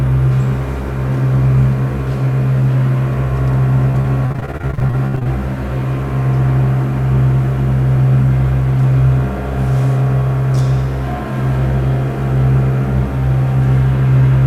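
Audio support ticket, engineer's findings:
Repeated packet loss (robotic sound), 3.91 to 5.27 s. Choppy, robotic stretch with many short holes, longest about 67 ms. About a third of the span is concealed by continuing the previous sound.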